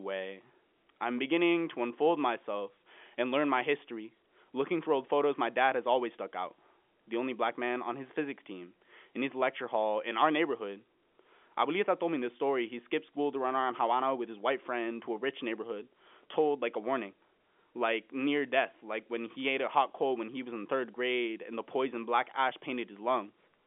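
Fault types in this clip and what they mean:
No faults found: the speech occupies the normal telephone band of about 200 Hz to 3.4 kHz with nothing above 3.7 kHz, consistent with 64 kbps A-law G.711 telephone coding working as intended.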